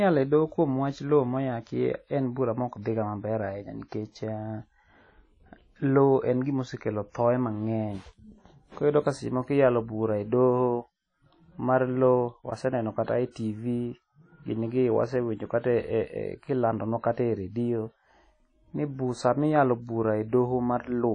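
Throughout, the speech carries a ringing, washy hiss that swells with the signal and nothing above 10 kHz, likely WMA compression at a low bitrate near 32 kbps.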